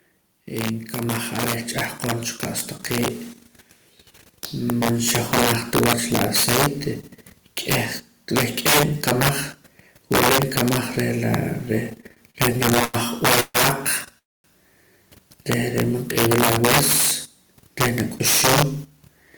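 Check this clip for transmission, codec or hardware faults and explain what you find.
Several faults are present: one runs through the whole recording and four kinds appear at specific moments.

Integer overflow affects the speech throughout. Loud peaks are driven about 13 dB past full scale, and instead of being held at the ceiling they wrap around to the opposite extreme. Only a small share of samples, around 2 percent, cross that limit, but each one flips across the full range. The result is sharp, violent cracks on the loudest syllables. Clipping would sound flattened and buzzy instead, so the snapping character marks this as wraparound rather than limiting.

Automatic gain rising occurs from 4.51 to 5.23 s. The gain control judged the input too quiet and raised its level by about 3 dB. The speech and the background noise swell together over those 0.72 s. A level change caused by someone moving closer would lift the voice without lifting the background, so the shared, gradual rise points to gain control.

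Repeated stalls (stutter) run from 12.01 to 12.96 s. Packets kept arriving late, so the jitter buffer emptied eleven times across that span. Each time, the receiver extended the last sound to cover the gap. The longest gap was 93 ms, and in total about a quarter of the span was filled in. Nothing is lost, but the speech drags and catches repeatedly. That string of short hitches is what separates it from a single freeze.

Call audio freezes occur at 13.40 to 13.56 s and 14.18 to 14.46 s. The likely cause is packets held up in transit, which drained the jitter buffer. In the first freeze, 140 ms of continued sound fades to about 30 ms of silence. In the second, 257 ms is filled, and roughly 240 ms of it is near-silent. The speech then resumes exactly where it stopped, so a pause has been inserted rather than anything dropped, unlike a packet-loss dropout.

Jitter buffer speed-up runs from 18.75 to 19.31 s. 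With too much audio queued, the receiver trimmed many short pitch-period pieces, removing around 70 ms in total, to cut the delay. The speech plays at about 113 percent speed but keeps its pitch, so it sounds hurried rather than chipmunk-like. A resampling error would shift the pitch as well as the speed.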